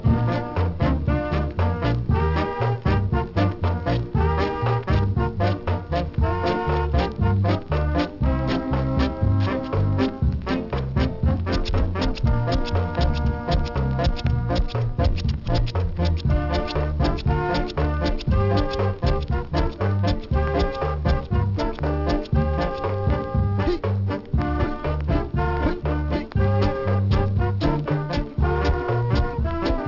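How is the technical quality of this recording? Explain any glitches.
The recording has one persistent fault: aliasing. Throughout the clip, the high end sounds gritty and metallic, with harsh tones that don't belong to the sound. The content appears to have been downsampled without an anti-aliasing filter, which fits a drop from 44.1 kHz to 12 kHz. Everything above 6 kHz folded back below that point to unrelated frequencies, roughly 25 dB under the main signal, so the spectrum runs hard up to 6 kHz.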